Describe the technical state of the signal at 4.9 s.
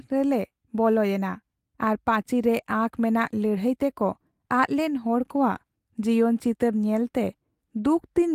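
At 4.9 s the speech signal is intact, with no dropout, distortion, glitch or other audible fault at that point.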